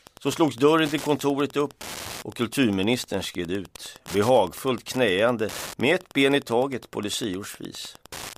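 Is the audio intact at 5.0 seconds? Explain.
No. At 5.0 seconds, Wi-Fi interference runs under the speech, as it does throughout the clip. A nearby radio's beacon, sent every 102.4 ms, is rectified by the audio circuit. It produces a steady tick about ten times a second, roughly 20 dB below the speech.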